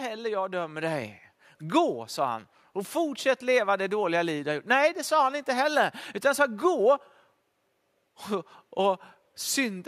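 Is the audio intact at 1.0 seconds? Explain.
No. At 1.02 s the microphone volume stepped up: the call software judged the input too quiet and raised the device's capture volume in a single step, by about 4 dB. Because the change happens at the microphone itself, before any processing of the speech, the voice and the background noise jump up in level together at that instant, and everything after it sounds louder than what came before.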